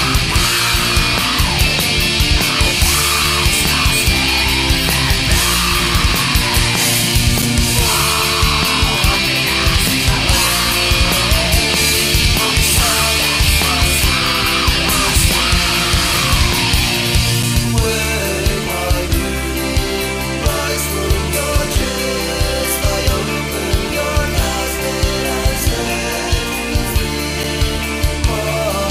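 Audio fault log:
7.42, 17.43 and 27.43 s: gap between chunks. The audio is split into 10-second chunks, with 7 ms of silence between them. The sound cuts out abruptly and resumes, a brief hard-edged dropout. A waveform shows flat near-silent slivers. A spectrogram shows thin blank vertical stripes.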